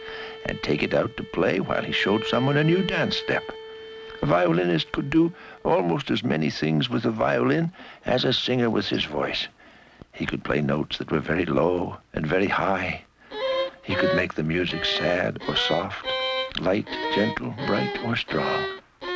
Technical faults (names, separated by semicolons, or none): none